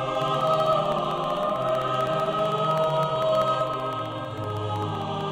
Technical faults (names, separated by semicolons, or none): periodic USB or driver dropouts